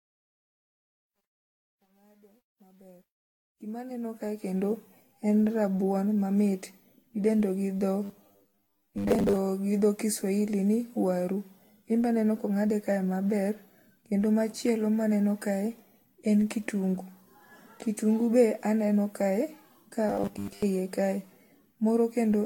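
From 0.0 to 4.75 s the speech fades in, but the fade shows truncation distortion. It is worst up to 3.47 s, where the waveform breaks into coarse square steps and the sound turns gritty. That points to a gain stage keeping about 10 bits with no dither.

Generation loss runs through the whole clip. The speech sounds swirly, hollow and smeared, with blurred attacks, and the spectrogram shows a ceiling at 19.3 kHz. The likely cause is about ten passes of Vorbis encoding at around 60 kbit/s.

From 8.04 to 9.37 s and again from 20.09 to 20.63 s, the speech becomes a rigid metallic 100 Hz buzz. This is robotic sound from repeated short buffers. The spectrogram shows evenly spaced harmonic lines, which fits roughly 10 ms chunks likely being repeated while most of the real audio is skipped.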